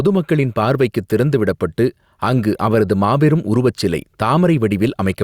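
Throughout this speech recording, the level pumps against loud syllables, a swing of about 5 dB that leaves the delivery flattened. This gain pumping likely comes from heavy input gain reined in by a fast limiter.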